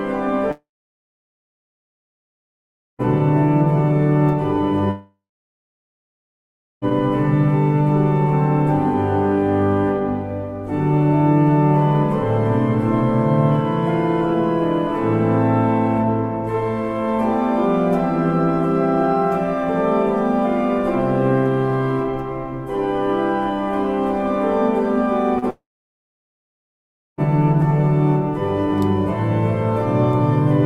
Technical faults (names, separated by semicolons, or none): long network dropout; short concealed packet loss